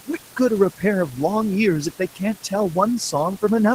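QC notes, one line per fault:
Throughout, noise suppressor artifacts: the suppressor pulls down the bands it judges to be steady noise by about 17 dB, one frame at a time, so the room noise drops away in the gaps between words and comes back up beneath the speech whenever speech is present.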